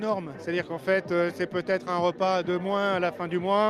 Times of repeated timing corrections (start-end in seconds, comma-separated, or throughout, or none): 0.75-3.70